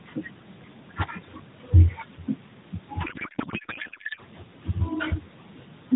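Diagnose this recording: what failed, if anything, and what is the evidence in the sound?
Codec payload misread from 3.04 to 4.20 s, at the codec stage. The AMR narrowband speech turns into garbled noise and warble that barely tracks it, which points to octet-aligned frames being unpacked as bandwidth-efficient, so every field is read from the wrong bit positions.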